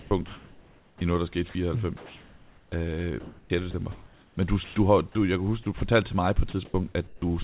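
From the start to 4.76 s the speech keeps dropping out into a flat, synthetic hiss, about 2.6 s of it in total, ending just before "du har du jeg". Shorter gaps follow at 5.63–5.81 s (about 60 ms lost, between "du jeg kan huske" and "til mig på") and 6.5–7.22 s (about 270 ms, after "til mig på"). This is sound chopped by the voice detector: the sender likely gated quiet stretches and substituted comfort noise. Quiet room noise sits under the band-limited call audio, which has nothing above 4 kHz.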